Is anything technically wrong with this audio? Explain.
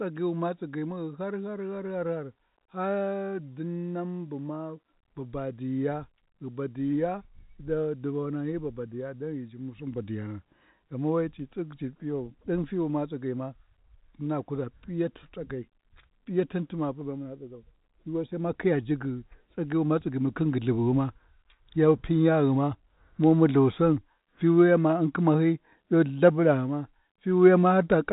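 No, nothing in this speech recording points to a technical problem. It has passed through G.711 telephone coding, consistent with 64 kbps mu-law, so nothing comes through above about 3.8 kHz, and any quantisation noise tracking the level is faint at most.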